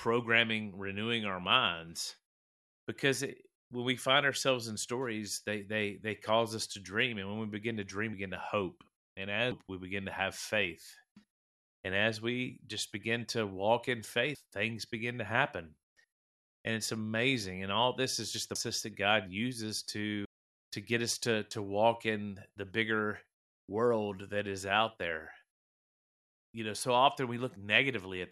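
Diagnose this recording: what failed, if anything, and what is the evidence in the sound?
The speech lurches forward with brief smeared blips at 8.13, 9.51, 14.34, 18.55 and 20.25 s, the longest gap near half a second after "to hope and". This is compressed frames skipped at the codec: missing or rejected 26.1 ms frames make playback jump ahead.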